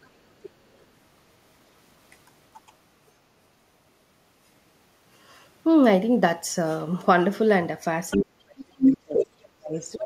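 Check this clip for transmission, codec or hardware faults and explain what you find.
Two faults are present, both in the speech, and both likely trace to echo cancellation on the far end's loudspeaker path.

Other side's voice leaking through, at 0.02–0.09, 0.42–0.84, 8.10–8.18, 8.59–9.25 and 9.76–9.98 s: a second voice is heard, very faint early on and roughly as loud as the talker by 8.59 s. The likely cause is residual loudspeaker echo the canceller failed to remove.

Speech suppressed in double talk, from 8.17 s to the end: the talker's level dips deeply and in pieces, over about a second and a half in total, while the other side speaks. The canceller has turned both down together.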